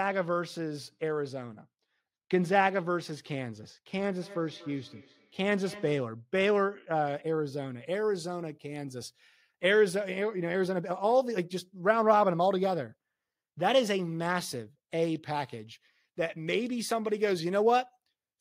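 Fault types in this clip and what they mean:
de-emphasis applied wrongly: A treble cut meant to reverse pre-emphasis hit audio that didn't need it, so highs fall smoothly, about 10 dB down at 10 kHz, muffling the speech.
feedback echo between two devices: One device replays another's microphone, which recaptures it, so words return roughly every fifth of a second, about 19 dB below the speech, thinning and ringing.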